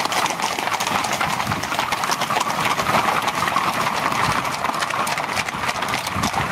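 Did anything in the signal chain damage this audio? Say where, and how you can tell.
Yes. All the way through, the level swings by around 10 dB, so it seems to breathe. Loud and quiet passages sit unnaturally close together and everything feels squashed. This is gain pumping at the input stage, likely from the microphone gain set far too high, with a fast limiter or compressor clamping down on every peak and releasing in the gaps.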